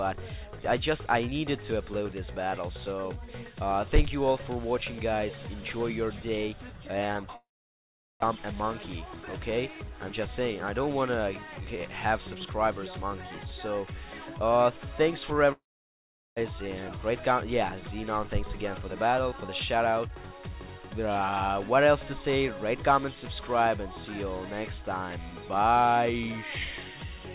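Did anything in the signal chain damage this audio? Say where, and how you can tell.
Yes. There are long network dropouts at 7.36–8.24 s and again at 15.52–16.39 s. Each time, the last sound carries on as a fading buzz and then gives way to near silence for about three quarters of a second. The audio then resumes with roughly 0.6 s of material gone. This points to the network stage. Packets likely stopped arriving, and the receiver stretched what it last had until that ran out.

A jitter buffer speed-up follows each gap, at 8.35–12.47 s and 18.24–20.39 s. The sound runs about 6% fast in the first stretch and 10% fast in the second, at unchanged pitch, so it feels hurried. After the outage the delayed packets arrived together. The receive buffer then cut short pitch-period pieces, around 200 ms in total each time, to bring the delay back down. The 4 kHz band limit of the G.711 call path is separate from this.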